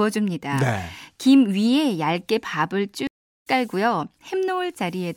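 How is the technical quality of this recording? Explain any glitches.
There's one real glitch, a stream reconnect from about 3.07 to 3.47 s. The connection dropped, so the player went quiet for roughly 335 ms, reconnected and spun up a fresh decoder partway through the stream. Because it picks up the live feed rather than where it left off, the speech comes back about 0.3 s further along, so a small chunk is simply skipped. The first frame after the restart fades in, so the return sounds soft rather than abrupt.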